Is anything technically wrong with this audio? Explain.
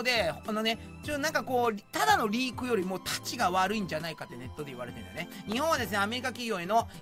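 Yes. At 5.52 s there is an electrical switching spike. It is a sharp snap laid over the sound, lasting only a moment. The likely cause is a nearby switch, motor or static discharge arcing briefly, which the audio line picked up.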